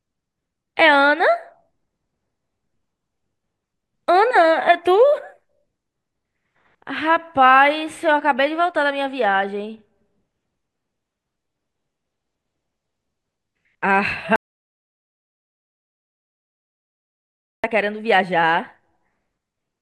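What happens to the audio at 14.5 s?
The input was likely lost and zeros were written, an audio dropout to silence from 14.36 to 17.64 s: the speech cuts off into total silence, no room tone, for 3.3 s.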